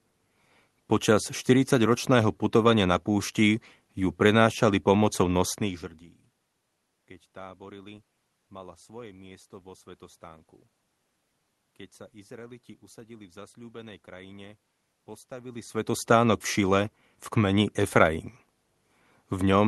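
No technical faults occur anywhere in this speech.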